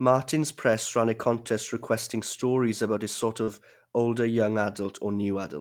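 At 3.43 s a short concealed packet loss begins: about 40 ms of the call failed to reach the decoder in time, and the receiver covered the hole by extending the preceding sound, carrying its pitch forward if voiced or substituting shaped noise if not, before crossfading back into real audio near 3.49 s. The result is a brief smear or wobble in the speech.

Overlapping the tail of that gap, from 3.47 to 3.49 s, is a lost packet rebuilt from error correction. Roughly 20 ms, which fits a single lost packet, was recovered from the low-bitrate redundant copy that Opus in-band forward error correction places in the following packet. Because the decoder played that copy instead of concealing, there is no further gap, but the rebuilt stretch sounds coarser and noisier than the audio on either side.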